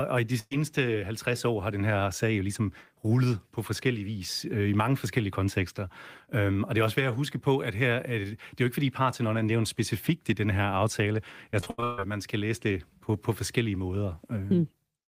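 At 0.39 s, right after "og i de", a burst of packet loss removes about 120 ms of speech, through 0.53 s. The receiver extends the last sound for about 115 ms and fades it, then leaves roughly 20 ms of silence before the speech picks up further on. On a spectrogram the last spectrum smears into flat horizontal bands that dim out, then a thin blank column before normal structure returns.

From 11.51 to 12.01 s, between "i den her aftale" and "man skal læse det", repeated packet loss gives a choppy, robotic stretch. Six gaps follow in close succession, the longest about 140 ms, and concealment fills about 59% of the half-second span. The waveform shows the envelope breaking into repeated, oddly uniform blocks. On a spectrogram, short smeared patches alternate with abrupt resumptions.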